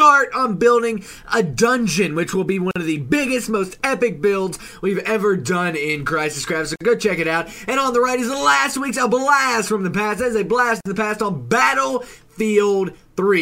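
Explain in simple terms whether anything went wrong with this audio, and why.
Brief silences of about 45 to 50 milliseconds cut into the sound at 2.71, 6.76 and 10.81 seconds. This is a gap at a join of encoded pieces. They recur exactly every 4 seconds and the sound resumes where it stopped, unlike random network dropouts.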